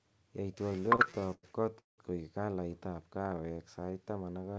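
From 0.70 to 2.00 s the speech suffers repeated stalls (stutter). Packets arrived late, and the jitter buffer kept running dry. Fifteen times the receiver stretched the last sound to cover the wait, the longest about 180 ms. Nothing is lost, but a third of this stretch is filler, so the speech drags and stutters.

From 3.08 to 3.92 s comes a jitter buffer slow-down. The buffer was low or had just raised its target delay, so it repeated single pitch periods to build up a reserve. This added 136 ms and played the speech at 85% speed. Sounds are drawn out at unchanged pitch. Through both, nothing reaches above 8 kHz, which fits a wideband call codec such as G.722.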